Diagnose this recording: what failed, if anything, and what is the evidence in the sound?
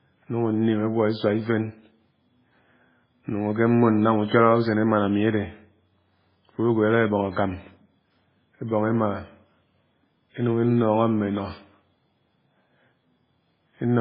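Heavy MP3 compression runs through the whole speech recording, most likely at the codec stage. Nothing survives above about 5.2 kHz, so sibilants sound dull and clipped. The remaining band has a watery, swirling texture, which fits a very low bitrate near 16 kbps. With too few bits, the encoder drops the treble and zeroes weak frequency lines that flicker between frames. A spectrogram would show a hard ceiling at 5.2 kHz and speckled, patchy holes below it.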